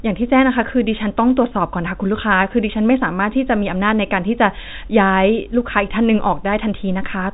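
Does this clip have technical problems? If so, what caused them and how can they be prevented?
No, there are no technical problems here.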